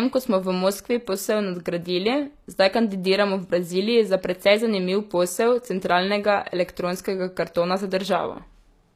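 Right from the start and through the whole speech clip, there's plainly audible HE-AAC compression damage, likely from that codec at a low bitrate, something like 24 kbps. The treble still reaches fairly high, but it's been rebuilt from copied lower bands rather than carried through, so its harmonics don't sit with the ones below. S sounds come out gritty and lispy, and there's nothing at all above about 14.9 kHz.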